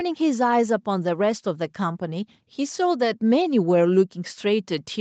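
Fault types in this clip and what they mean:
Nothing here counts as a fault: the speech simply carries the ordinary marks of a call, with no content above about 8 kHz, which fits a wideband call codec.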